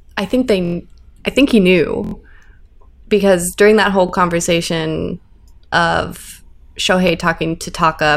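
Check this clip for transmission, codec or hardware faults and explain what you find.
Four repeated-buffer faults occur, where playback stalled and the device replayed its last block of about 23 ms, which fits a 1024-sample buffer. At 0.65–0.74 s, after "I think", and at 2.04–2.14 s, after "I think he", one block plays four extra times, giving a quick buzzy stutter. At 4.09 s, between "because during that whole" and "conversation of", and at 7.08 s, a single repeat makes a click. On a waveform these appear as identical 23 ms segments with hard edges, and on a spectrogram as evenly spaced vertical lines.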